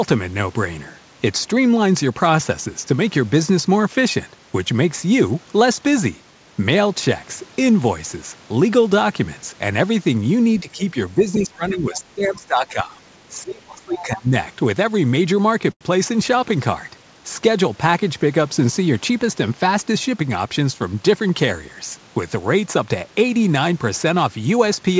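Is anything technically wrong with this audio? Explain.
Yes, the speech has three kinds of fault, all clustered between about 10.6 and 15.8 s.

Speech suppressed in double talk at 10.62–10.95 s, 11.15–12.97 s and 13.29–14.33 s: the talker's level drops by roughly 15, 20 and 30 dB, likely because the echo canceller ducked everything while both sides spoke.

The other side's voice leaking through at 11.40–11.44 s, 11.94–12.00 s and 13.93–14.02 s: brief faint scraps, about 25, 20 and 15 dB below the talker, which the echo canceller likely failed to remove.

A short stall from a late packet at 15.72–15.83 s: the jitter buffer ran dry, so 88 ms of sound is stretched and held too long, though nothing is lost.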